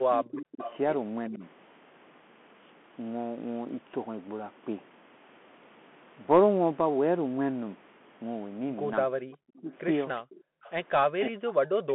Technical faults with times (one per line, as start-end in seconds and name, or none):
0.00-11.94 Bluetooth CVSD headset codec
0.15-0.66 speech suppressed in double talk
0.62-0.76 echo leak
1.29-1.43 speech suppressed in double talk
3.69 dropped samples
9.10-9.27 background gated by the echo canceller
9.32-11.53 echo leak
9.55-9.73 speech suppressed in double talk
10.40-10.62 background gated by the echo canceller
11.13-11.94 speech suppressed in double talk